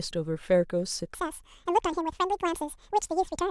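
At 1.15 s the speech abruptly switches to double speed and stays that way to the end. This is audio read two samples at a time: the reader treats each pair of samples as a single frame, as if the data held two channels or wider samples. Playback therefore runs at 2x speed and a full octave, 12 semitones, higher.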